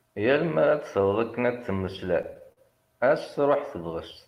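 From 1.85 to 2.59 s the speech breaks into repeated stalls, a stutter. Packets arrived late or slower than playback. The jitter buffer ran dry seven times in that stretch. Each time, the receiver stretched the last sound to cover the wait. About 114 ms was filled this way, roughly a sixth of the span. The longest hold lasts 45 ms. Nothing is lost. The speech simply drags and catches, hiccuping forward.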